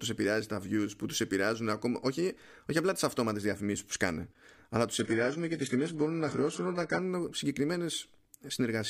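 After "που σκάνε αλλά τους", the adaptive stream fell to a lower bitrate from 4.99 to 6.99 s, and the speech abruptly loses everything above 11.5 kHz, without a gap.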